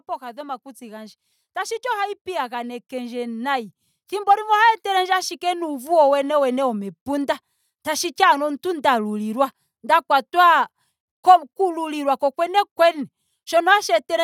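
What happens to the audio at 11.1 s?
Nothing goes wrong at 11.1 s: the speech carries on intact through that moment, with no dropout, click, distortion or other fault to be heard.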